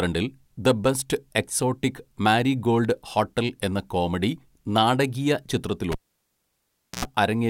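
Cable pulled and plugged in, 5.92 to 7.05 s. A pop drops the speech to near silence for 1.08 s. On reinsertion, the tip alone touches first, letting 91 ms of 60 Hz mains buzz through before a second pop restores the signal.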